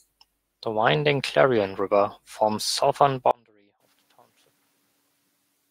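From the start of the clip there are noise suppressor artifacts. The suppressor pulls down the bands it judges to be steady noise, frame by frame, but only by about 3 dB. The background therefore dips slightly in the gaps and swells back under the speech. On a spectrogram the noise floor looks blotchy and mottled rather than smooth, shifting in small patches from one frame to the next.

At 3.31 s, right after "forms southern", the speech cuts out abruptly and does not return before the end. This is an audio dropout to a faint residue, likely caused by the wanted signal being lost while the path after the break stayed live. What remains is only a faint trace of sound, roughly 35 dB below the earlier level. Around 4 s the room noise swells by about 25 dB, to about 16 dB below the speech level. On the waveform the envelope collapses to a thin sliver at 3.31 s with no fade. The spectrogram shows a hard vertical edge there, with speech harmonics vanishing and only a dim wash below.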